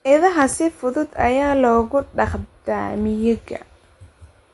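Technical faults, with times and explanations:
Throughout: MP3 compression. The audio stops dead above 11.2 kHz, and the speech carries a plainly audible watery, swirling texture, with metallic chirps on s sounds and softened consonant attacks. This is likely heavy MP3 encoding, which fits a low bitrate around 48 kbps. Short of bits, the encoder removes the treble at a fixed cut-off and discards weak frequency lines, which then flicker on and off between frames. That flickering produces the swirl and chirps.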